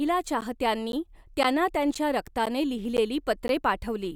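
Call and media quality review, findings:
Gap between chunks: seven short, hard-edged holes of about 12 ms each in the speech, at 0.41, 0.92, 1.43, 1.94, 2.46, 2.97 and 3.48 s. Dead-regular spacing of roughly 0.51 s, i.e. 0.5 s blocks plus the hole. Nothing's dropped from the speech, it just stalls briefly at each join. Probable component: packetiser or player starting each half-second chunk a touch late, or codec padding inserted at block boundaries.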